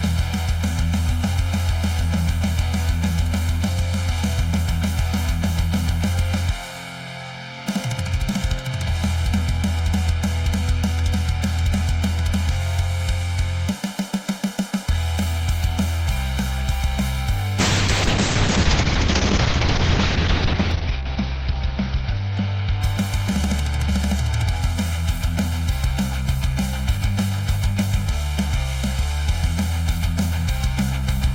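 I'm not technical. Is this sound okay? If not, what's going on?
No. Throughout, there is channel delay (comb filtering): one side arrives about 1.5 milliseconds late, so mixing cancels evenly spaced pitches from a few hundred hertz upward, making everything hollow. From 17.61 to 24.89 s, a call bitrate drop makes the connection send far less detail. The sound turns rough and muffled, with the top above 6 kHz cut, and is worst for nearly three seconds.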